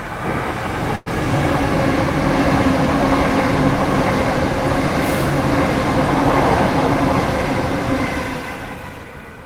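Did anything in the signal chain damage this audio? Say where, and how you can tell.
Yes. At the network and jitter-buffer stage, packets were likely held up in transit and the buffer ran dry, producing a call audio freeze from 0.95 to 1.08 s. For about 107 ms the receiver stretches the last sound into a fading buzz or hiss rather than silence. When the delayed packets arrive, the audio resumes where it stopped. Nothing is lost, but the inserted gap pushes everything after it about 107 ms later.

Near the end, the same buffer corrects itself with a jitter buffer speed-up from 8.44 to 9.21 s. Holding more audio than its target, the receiver repeatedly cuts out short pitch-period-length slices, removing roughly a tenth of a second in total. The sound plays at about 111% speed with its pitch unchanged, so this closing stretch comes across as hurried and compressed in time.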